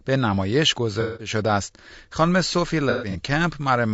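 Speech runs throughout with a rough, grainy texture, noise filling the gaps between voice harmonics and a thin, synthetic-sounding top band. The likely cause is low-delay AAC compression (AAC-ELD) at a bitrate around 32 kbps. On a spectrogram the harmonic stripes look blurred and speckled, and the upper band shows smeared, patchy energy. AAC frame loss with concealment interrupts the sound twice. From 1.01 to 1.30 s, about 180 ms is missing and is replaced by a smeared, phasey patch. On a spectrogram this shows as a frozen, blocky stretch of spectrum, and the waveform envelope goes flat or dips there. From 2.90 to 3.16 s, about 150 ms of losses are scattered over 240 ms, with the longest gap about a tenth of a second. Each gap appears as a short noisy smear with broken harmonic lines.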